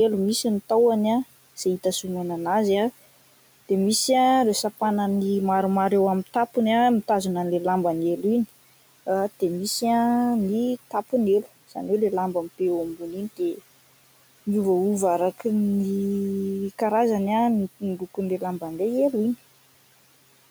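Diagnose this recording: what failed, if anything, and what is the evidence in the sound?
Call processing failed here: speech cut by the noise suppressor, between 17.80 and 18.18 s. Within that window the speech drops by up to about 12 dB, and roughly a tenth of a second in total sounds swallowed and faint. The suppressor judged the quieter parts of the speech to be noise and attenuated them together with the background. The room noise, about 21 dB below the speech, is part of the recording rather than a fault.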